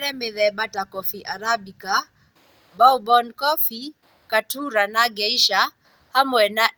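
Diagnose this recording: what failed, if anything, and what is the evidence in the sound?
Nothing failed at any stage of this speech recording.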